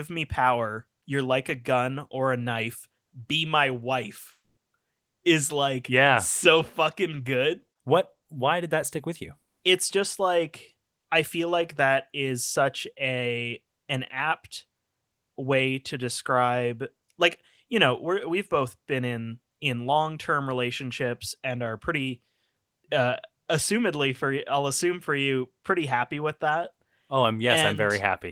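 Long network dropout, 4.31 to 4.59 s: speech dissolves into a fading buzz, then 200 ms of silence, likely because arriving audio stopped, losing 260 ms.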